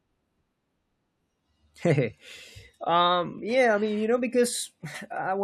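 At 3.38 s there is an overlap between stream segments: two segments claimed the same stretch of time, and the player trimmed about 18 ms of real speech. It is heard as a small click or skip. The waveform shows an abrupt discontinuity, and the spectrogram a thin vertical broadband line.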